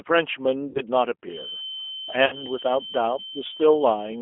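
Across the whole recording the speech carries the sound of the G.729 codec, most likely its G.729A variant at 8 kbit/s. The band runs only from about 300 Hz to 3.5 kHz, so the voice is thin and muffled. Because the decoder rebuilds each 10 ms frame from a vocal-tract filter, a pitch predictor and a few pulses, the voice comes out plainly rough and slightly synthetic rather than natural.

From 0.69 to 0.81 s, and again from 2.26 to 2.44 s, VoIP packet loss concealed by the speech codec breaks the flow. Each time about 60 ms of audio is missing, which fits two lost packets. The decoder fills each gap by repeating its last pitch and filter at falling gain, producing a buzzy tone or coloured noise that fades. Because each frame depends on the one before, the voice stays weak or distorted for a short while after real audio resumes.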